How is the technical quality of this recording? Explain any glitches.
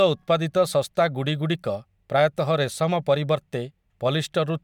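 No glitches or faults can be heard in this recording. Nothing interrupts or disturbs the speech at any point.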